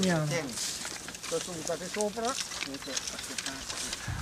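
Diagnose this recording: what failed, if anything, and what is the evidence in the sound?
The analogue wiring is where this went wrong: there's mains buzz running through the whole clip, a steady raspy buzz sitting roughly 20 dB under the wanted sound. It's built on 60 Hz, with sharp spikes arriving twice per cycle, so the harmonics stack up well into the kHz range and give it that edge rather than a smooth hum. That points to a switching source, like a dimmer or rectifier, or a missing shield letting interference into the signal path.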